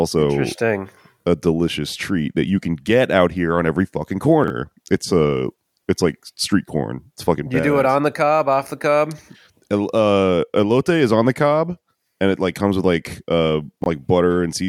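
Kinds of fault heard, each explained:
Chunks out of order: A short block of audio is played after the blocks that should follow it, so the sequence is briefly scrambled with nothing missing. Each join is hard, giving a jumbled moment. It occurs at 4.44 to 4.50 s, where a 20 ms chunk lands about two chunks late, and at 13.82 to 13.86 s, where a 20 ms chunk lands one chunk late.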